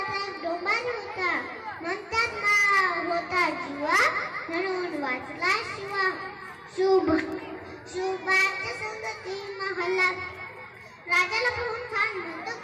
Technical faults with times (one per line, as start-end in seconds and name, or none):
0.37-11.48 word clock ticks